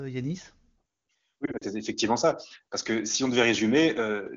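Between 1.45 and 1.65 s, just before "effectivement ça", the speech breaks up from lost AMR speech frames. About 80 ms of audio goes missing in short gaps scattered across 160 ms, the longest around 40 ms, which fits two consecutive 20 ms frames. For each gap the decoder repeats the last good pitch and vocal-tract settings at reduced gain, so the sound wavers and dips rather than cutting cleanly. The surrounding AMR wideband (HD Voice) coding sounds like a high-rate mode.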